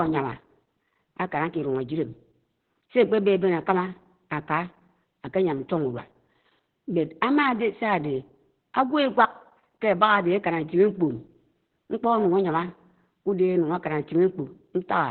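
The speech sounds muffled, hoarse and faintly robotic from start to finish, with nothing audible above about 4.2 kHz. This is Opus voice compression under heavy strain: at a rate consistent with about 8 kbps, the encoder has fallen back to its SILK linear-prediction coder in narrowband mode, discarding the upper band entirely and coding the excitation coarsely, which strips breathiness and consonant detail and leaves the buzzy, synthetic edge heard throughout.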